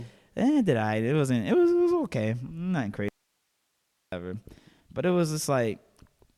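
Speech with an audio dropout to a faint residue from 3.09 to 4.12 s: for about 1.04 s the voice vanishes abruptly, leaving only hiss roughly 50 dB down, not a natural pause or fade, likely a break in the signal while the path downstream stayed live.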